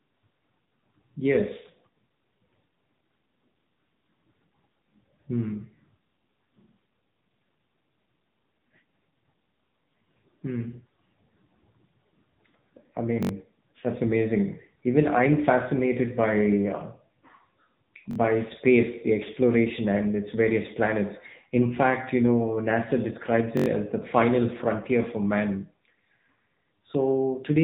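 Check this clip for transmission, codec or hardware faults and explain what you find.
Two faults are present: mobile-codec coding across the whole clip and three brief stutters from a repeating playback buffer.

AMR narrowband mobile codec, throughout: the speech has passed through AMR-NB at 7.95 kbps, which samples at 8 kHz and rebuilds the voice from a vocal-tract model excited by a few pulses per subframe. Nothing above 3.8 kHz survives, so the speech sounds muffled, plainly buzzy and synthetic.

Repeated buffer, at 13.23–13.29 s (before "that's amazing"), 18.11–18.16 s (before "space the exploration and") and 23.57–23.66 s (before "as the final frontier"): when fresh audio was late, the last block, about 21.3 ms long, which fits a 1024-sample buffer, was replayed three, two and four extra times. Each event is a short, hard-edged stutter, and roughly 70, 40 and 100 ms of real speech is lost respectively.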